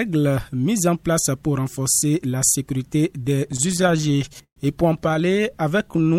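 Repeated stalls (stutter) from 3.47 to 4.58 s: packets arrived late, so the jitter buffer kept emptying and the receiver extended the last sound through twenty gaps, the longest 127 ms. Nothing is lost, but the sound drags and stutters. A shorter burst of four tiny stalls follows from 5.04 to 5.22 s.

Jitter buffer slow-down from 5.78 to 6.09 s: the receiver repeated pitch periods to rebuild its reserve, adding 48 ms. The sound runs at 87% speed, drawn out at unchanged pitch.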